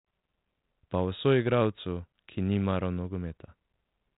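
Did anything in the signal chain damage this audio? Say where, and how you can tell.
No, the speech sits in a telephone band with nothing above about 3.8 kHz, as expected from a G.726 ADPCM path at 32 kbit/s, and no stage of the chain shows any damage beyond that.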